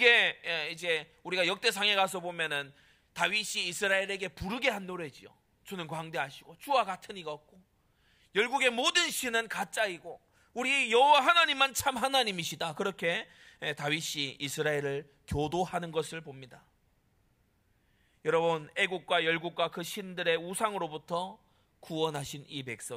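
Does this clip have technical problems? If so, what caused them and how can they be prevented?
No, the speech signal shows no technical faults that a listener can hear, so nothing here needs tracing to a cause or preventing.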